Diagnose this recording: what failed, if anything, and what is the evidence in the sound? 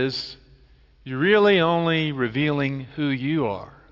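Listening closely to the speech, nothing stood out that would point to a failure anywhere in the recording chain.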